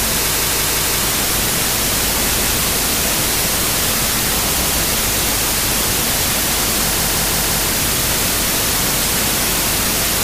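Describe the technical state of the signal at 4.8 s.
Right at 4.8 s the signal is coming out of a repeated buffer spanning 4.61 to 4.78 s. Playback ran short of fresh data, so one 171 ms block, which fits an 8192-sample buffer, played a second time. This produces an audible stutter with a hard join, and no audio appears lost.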